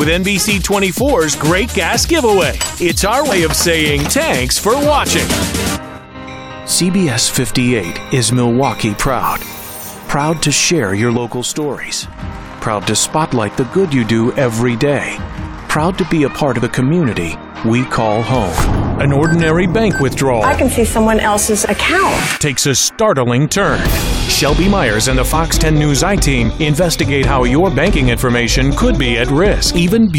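At 5.98 to 6.15 s, and again from 11.17 to 12.18 s, the level suddenly sags by about 6 dB, then snaps back. That's most likely one channel drops out: one stereo side goes missing, so the mono sum loses half its shared content.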